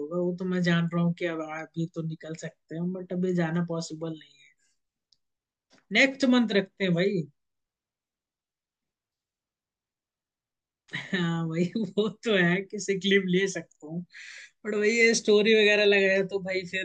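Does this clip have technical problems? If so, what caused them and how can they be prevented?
No, the speech signal shows no audible technical faults, so there is nothing here to trace to a cause or guard against.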